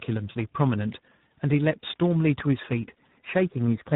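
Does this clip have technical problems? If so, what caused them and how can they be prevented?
Yes. Tandem speech coding throughout: rough, warbly speech with nothing above 3.8 kHz, pointing to several codecs in a row, each re-coding the last one's damaged output. To prevent it, keep one codec end to end, or pass the coded stream through between networks instead of decoding and re-encoding at each border.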